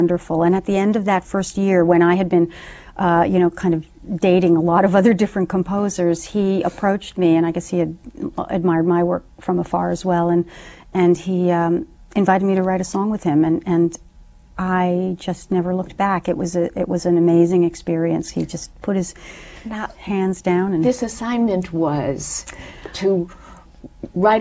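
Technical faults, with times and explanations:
No technical faults are audible.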